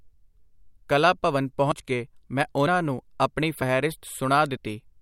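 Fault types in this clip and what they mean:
Audio missing between chunks: short skips near 0.77, 1.72, 3.62 and 4.57 s, each roughly 50 ms, likely from a recorder losing audio at chunk boundaries about every 1.0 s.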